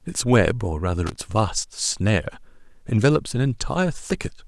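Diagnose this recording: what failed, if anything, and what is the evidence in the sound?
The analogue wiring failed: a burst of loose connector crackle runs from 1.07 to 1.16 s, about 90 ms of irregular scratching over the speech. A worn or dirty contact was intermittently opening and closing, chopping the signal and producing clicks as the circuit made and broke.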